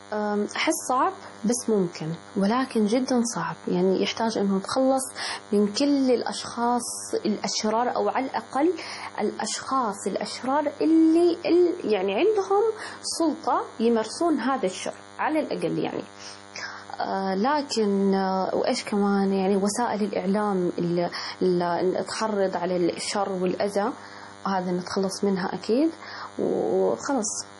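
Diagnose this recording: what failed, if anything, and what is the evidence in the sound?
DECT cordless phone buzz throughout: a 100 Hz buzz rich in harmonics, about 20 dB below speech, from analogue wiring rectifying radio bursts every 10 ms.

MP3 compression throughout, a likely codec-stage fault: nothing above 11.5 kHz and heavily watery, swirling speech, fitting a 32 kbps encode that zeroes weak frequency lines.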